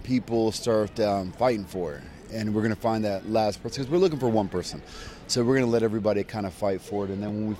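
Periodic USB or driver dropouts run from 5.29 to 7.29 s, about once per second, roughly three in all. Each time, something stalls the audio path and a few milliseconds of sound are skipped outright, leaving small, evenly spaced ticks.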